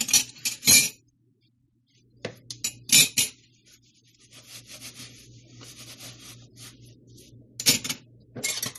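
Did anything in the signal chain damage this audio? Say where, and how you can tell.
Yes, at the codec stage, throughout the clip: transcoding between lossy codecs. Nothing is present above 12.2 kHz, and two different kinds of compression artefact are heard together. That likely comes from a low-bitrate MP3 re-encoded to AAC-LC, which kept the MP3's cut-off and added its own artefacts.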